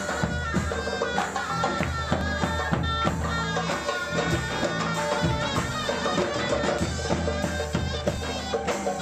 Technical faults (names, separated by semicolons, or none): audio missing between chunks